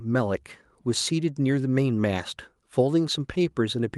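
No technical faults can be heard.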